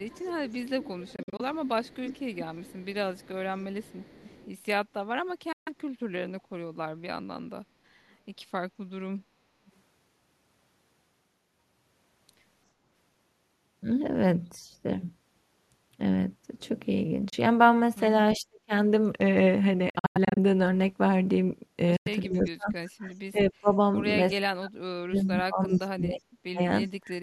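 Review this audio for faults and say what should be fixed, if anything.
The far end's echo canceller likely let its loudspeaker pickup through: an echo leak adds a copy of the speech 350 ms late, about 20 dB down from 0.0 to 4.49 s, and a faint trace near 8.11–8.15 s.

Packets to the headphones likely arrived too late and were dropped. This Bluetooth dropout leaves abrupt silent holes at 1.16–1.41, 5.52–5.69, 17.30–17.34, 19.90–20.38 and 21.96–22.08 s, with the speech resuming further along.

When both sides talked at once, the canceller likely turned the talker down too. This speech suppressed in double talk costs up to about 40 dB at 18.37–18.73, 22.27–23.73, 24.32–26.6 and 26.91–27.22 s.

Better echo cancellation with double-talk detection on the far end, plus a stronger Bluetooth link or a larger headphone buffer, would prevent these faults.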